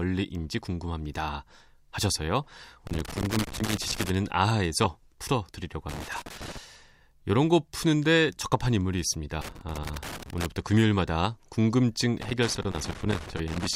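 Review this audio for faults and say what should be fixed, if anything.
A worn or dirty contact in the signal path is making and breaking as it moves, chopping the speech. The result is loose connector crackle: irregular bursts of scratching at 2.87–4.10 s, 5.89–6.57 s, 9.41–10.46 s, and 12.22 s through the end. Cleaning or replacing the connector and securing the cable so it can't shift would prevent it.

A 10 ms chunk of audio was delivered one chunk late, so it plays after the chunk that should follow it, leaving chunks out of order with three hard joins. Each instance is a brief jumbled moment in the speech, at 4.84–4.86 s and again at 12.59–12.61 s. Buffering with sequence checks before playback or writing would prevent it.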